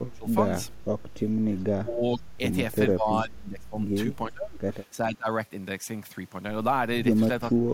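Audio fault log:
0.0–0.47 s, 1.82–2.4 s, 2.91–3.75 s, 4.28–4.62 s, 4.97–5.28 s, 7.54–7.73 s: speech suppressed in double talk. The echo canceller likely took the talker for loudspeaker echo while both sides spoke and turned the line down. The speech sinks by about 15 to 30 dB, deepest at the end, for a few tenths of a second each time, and for about 0.7 s in the 2.91–3.75 s stretch.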